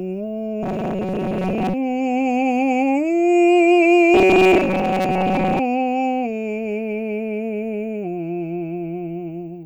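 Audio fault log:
0.63–1.75 s and 4.14–5.60 s, robotic sound from repeated short buffers: the music collapses into a rigid metallic buzz pitched at 188 Hz that still loosely tracks the passage. This is likely a short slice of about 5.3 ms being replayed for most of each stretch while new audio arrives late. A fixed tone is imposed, and it does not change with the music.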